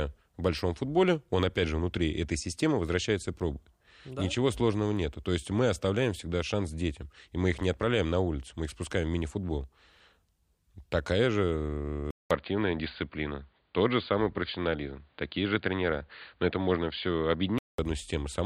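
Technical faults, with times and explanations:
12.11–17.78 s, input switched to a poorer device: right after "же э" the sound drops out for 200 ms, then returns narrowed, with nothing above 4.7 kHz, so it turns dull and boxy while the level stays about the same. A new, faint background noise sits roughly 45 dB below the signal. The likely cause is the system switching to another microphone or a headset call profile, whose narrower band, different tone and own noise floor replace the original device until full bandwidth returns.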